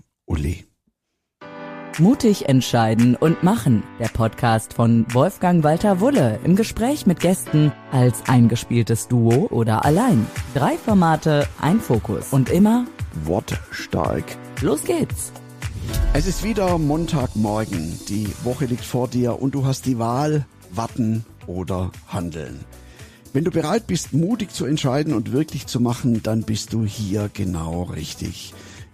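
No technical faults can be heard anywhere in this audio. There is nothing that needs a timestamp or further comment.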